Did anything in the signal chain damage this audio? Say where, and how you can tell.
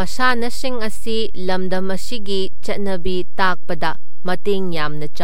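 Yes: a DC offset runs through the whole speech clip, pointing to the analogue front end or the converter, where a constant voltage or an uncorrected bias gets added before the signal is captured. The entire waveform sits shifted away from zero, at about -10 dBFS. You don't hear this as a sound. It shows as a steady spike at 0 Hz in the spectrum, and it eats headroom, so peaks on one side reach full scale sooner.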